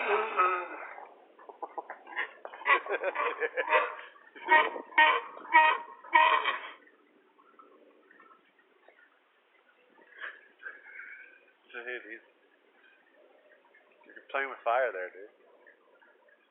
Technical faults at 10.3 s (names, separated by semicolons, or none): none